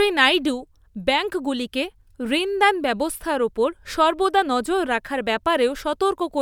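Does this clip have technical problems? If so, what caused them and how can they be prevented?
No, the speech signal holds steady throughout, with no audible technical faults to trace to a cause or guard against.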